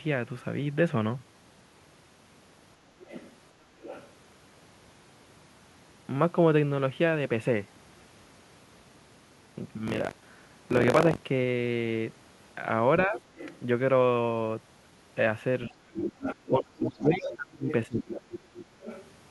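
From 3.04 to 4.08 s, the echo canceller likely left part of the loudspeaker signal in the microphone path, so the other side's voice leaks through, about 20 dB below the speech. It returns from 13.36 to 13.59 s, and from 15.72 to 19.07 s it is louder, about 10 dB down.

From 9.86 to 11.24 s, buffer tearing sets in. The writer and the hardware reader have slipped and cross inside each period, which fits a 1024-sample buffer. About 15% of each buffer carries audio some 40 ms old, and the hard joins produce a robotic 46.9 Hz buzz.

Speech is suppressed in double talk from 13.07 to 13.14 s (about 5 dB) and from 15.67 to 15.74 s (about 10 dB). While the other side likely talks, from 16.49 to 18.33 s, the speech drops up to about 30 dB for around 1.5 s in total.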